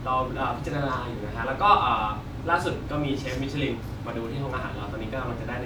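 No technical faults are audible in this recording.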